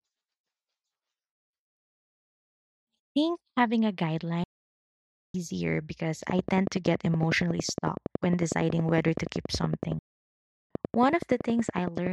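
At 4.44 s, just after "think having a", the speech halts in mid-flow and the output goes silent until 5.34 s, a playback stall of about 0.9 s. The player was likely starved of data or had its thread blocked, so nothing reached the output until it recovered. What separates this from a brief dropout is the length: close to a full second of dead air rather than a gap of a few milliseconds.

From 6.30 s to 12.08 s a train of clicks runs over the speech. Around 70 pulses of much the same shape arrive at a regular 10.7 per second, peaking about 15 dB above the signal, and they are heard as a steady ticking laid over the sound. That even spacing and repeated shape set it apart from random crackle, where impulses vary in size and timing. The likely source is interference from nearby equipment or a faulty connection or power supply injecting pulses.

Within that stretch, from 9.99 s to 10.71 s, the output stalls a second time for about 0.71 s, again cutting the speech off mid-flow before it returns.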